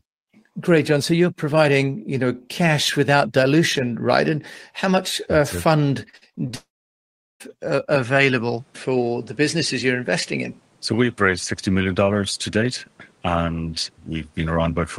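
Repeated packet loss (robotic sound) runs from 6.09 to 6.55 s. Audio packets were lost or arrived late over and over, and each hole was patched by stretching the sound just before it. About six short holes, the longest 42 ms, add up to roughly 180 ms missing, so about 39% of that half-second is filled-in sound. It comes across as choppy, with small pieces dropping out.

A long network dropout follows straight on, from 6.55 to 7.42 s, and is likely the cause of what is heard there. The receiver first carries the last sound forward as a fading buzz or hiss, then only silence remains for about 0.75 s. Close to 860 ms of audio never plays, and the sound picks up again later with that stretch simply gone.

From 7.95 s to the end, the sound is likely coming through an input switched to a poorer device. The change happens with no gap and no obvious jump in loudness, but nothing above 11.2 kHz gets through from then on, so the top end turns duller. 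A new background noise also appears, sitting roughly 35 dB below the signal, which gives the rest of the recording a different tone and noise floor.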